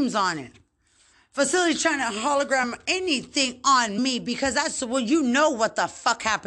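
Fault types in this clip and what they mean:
Compressed frames skipped: a jump ahead at 2.63 s where about 20 ms of speech vanishes, as whole coded frames were missing or rejected by the decoder.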